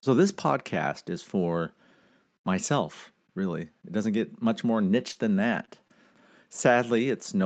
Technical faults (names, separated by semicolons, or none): short concealed packet loss; lost packet rebuilt from error correction